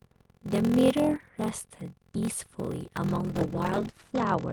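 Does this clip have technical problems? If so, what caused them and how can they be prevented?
Yes. A block size mismatch (padded) runs throughout. Each block is shorter than the next stage reads, which fits a 1024-sample read block, so the remainder is filled with silence. That gap repeats at 43.1 Hz, producing a steady buzz, and the sound plays at 0.861 times normal speed while keeping roughly its normal pitch. To prevent it, match the block size written by one stage to the size the next stage reads, or buffer and re-chunk between them.

A call bitrate drop begins at 3.06 s and lasts to the end of the clip. The encoder falls from 32 kbps to 11 kbps and stays at its lowest for 1.17 s. Bandwidth narrows from 20 kHz to 8 kHz, so the sound turns muffled and coarser. To prevent it, secure more stable network capacity or set a higher minimum bitrate for the encoder.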